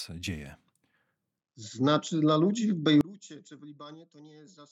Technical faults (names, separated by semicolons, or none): one channel inverted